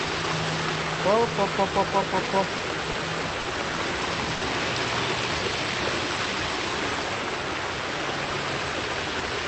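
Between 2.25 and 4.33 s there are five short stalls from late packets, at 2.25, 2.57, 2.91, 3.40 and 4.33 s. Each time the jitter buffer ran dry and the last sound was stretched, by 20, 20, 30, 50 and then 80 ms, before the audio resumed with nothing lost. You hear held, slightly buzzy drags that get longer toward the end, all over the call codec's band-limited sound.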